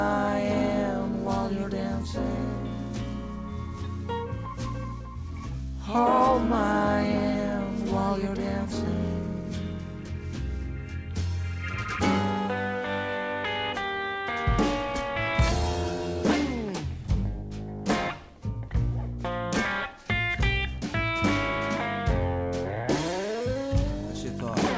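No faults can be heard in the signal, which has passed through a call path whose bandwidth stops at 8 kHz, consistent with wideband G.722 at 64 kbps.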